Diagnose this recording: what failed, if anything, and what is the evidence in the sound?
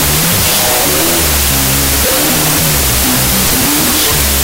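The failure is at the sample-format conversion stage, a wrong sample width. It runs for the whole clip. The speech sits buried under loud, harsh noise. It plays at half speed, an octave low. That points to 32-bit float data being read as 16-bit integers. Each stored sample is split into two values, doubling the sample count. Half the values come from low mantissa bytes and sound as noise. The other half keep enough sign, exponent and top-mantissa bits to carry a distorted trace of the speech.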